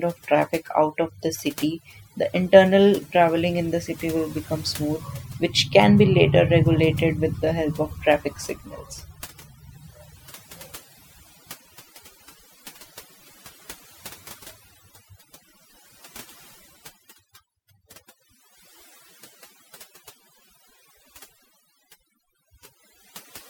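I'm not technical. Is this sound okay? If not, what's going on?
No. Throughout the speech there is overdone noise removal: a clean-up tool was set too strong, so whenever a slice of the sound drops close to the hiss level it gets turned far down or off. The pauses become much quieter and break up into little twinkling specks. It differs from a brief dropout or glitch because it never stops. The damage follows the quiet moments all the way through rather than hitting one spot.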